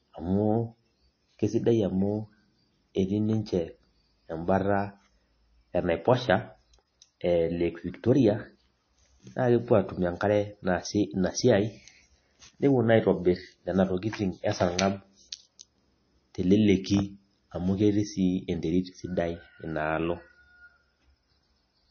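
A speech recording carries plainly audible MP3 compression artefacts for its whole length. Nothing sounds above about 6.5 kHz, so sibilants lose their crispness and the voice has a watery, swirling texture, which points to a very low bitrate near 25 kbps. The likely cause is an encoder short of bits cutting the treble and dropping weak frequency lines. A spectrogram would show a flat ceiling at 6.5 kHz and patchy, flickering holes below it.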